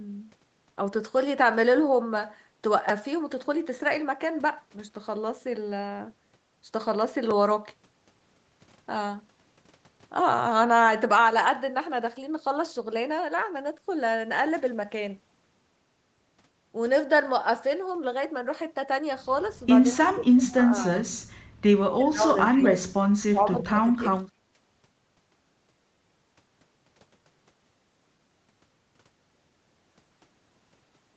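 Right at 2.89 s and again at 7.31 s there's a repeated buffer. Fresh audio didn't arrive in time, so the same tiny slice, about 5.3 ms (which fits a 256-sample buffer), played again. It's so short it comes across as a quick click or buzz rather than a stutter.

Later the speech gets pushed down in patches at 19.93–20.83 s, 21.88–23.05 s, 23.31–23.7 s and 23.96–24.3 s, dipping by up to around 30 dB at its deepest. The likely cause is speech suppressed in double talk: the echo canceller apparently mistook the talker for far-end echo and turned everything down.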